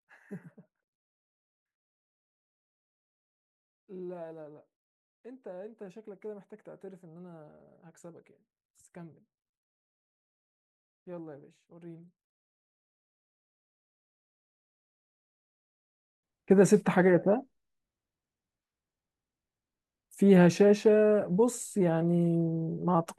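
From the start to 16.23 s, one channel is likely inverted, its polarity flipped so the two sides work against each other when summed to mono. The speech, sitting equally in both channels, largely cancels and drops by about 22 dB, leaving only the small difference between left and right: a faint trace of the voice. Past 16.23 s the voice returns at full level.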